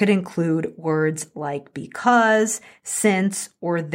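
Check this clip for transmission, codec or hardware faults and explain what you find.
No faults can be heard anywhere in this recording.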